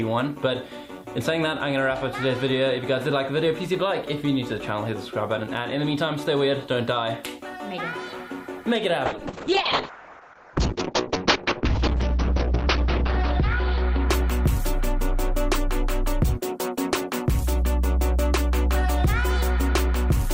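From 9.07 s to 15.39 s the sound turns rough, watery and muffled, as everything above about 6 kHz disappears where content up to 20 kHz was present before. It is at its worst for about 3.8 s before clearing. This is a call bitrate drop: the bandwidth estimate collapsed and the encoder was starved of bits, which points to a fall from around 64 kbps to roughly 6 kbps, so it coded coarsely and narrowed the band.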